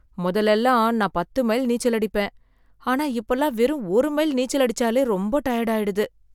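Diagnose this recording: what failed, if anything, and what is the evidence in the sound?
Nothing failed; no stage shows a fault here.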